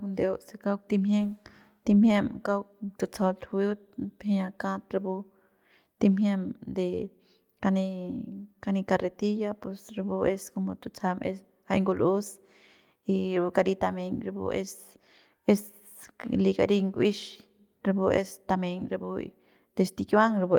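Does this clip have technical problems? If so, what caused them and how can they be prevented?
No, there are no technical problems to point to in this speech clip. With no fault present, there is nothing here that needs a cause traced or a fix applied.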